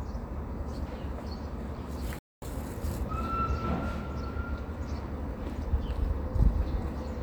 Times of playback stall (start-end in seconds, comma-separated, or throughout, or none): 2.19-2.42